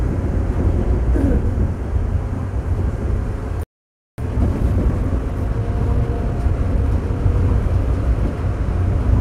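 At 3.63 s the audio cuts to silence for about 0.55 s, a playback stall, likely from the player running short of data or having its output thread blocked. From 4.18 s to 7.18 s, time-compressed catch-up clears the backlog: short pieces are cut and cross-faded, so the sound runs about 1.1 times fast at normal pitch.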